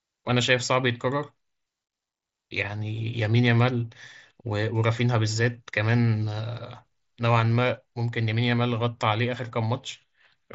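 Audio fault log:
Nothing to log here, just speech coming over a Bluetooth mSBC headset link that's doing its normal job, with the usual wideband ceiling around 8 kHz.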